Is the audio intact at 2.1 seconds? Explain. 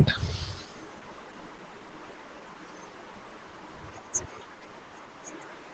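No, there's an echo leak running through that moment, from 0.01 to 5.7 s. A faint copy of the speech trails the original by about 0.26 s, sitting around 25 dB down, likely a loudspeaker on the far end whose echo canceller let some of its own mic pickup slip back.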